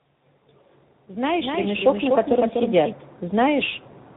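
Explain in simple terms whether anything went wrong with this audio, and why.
The call passed through two different speech codecs in a row, one from a mobile link and then one from a Bluetooth-style link. That is tandem speech coding. Each squeezed the speech again, so it sounds rough, muffled and warbly, with nothing above 3.8 kHz.

From 1.34 to 2.92 s, a doubled audio track appears, likely because the same sound was captured a second time by a slower path. A somewhat quieter copy trails about a third of a second behind, then starts and stops abruptly.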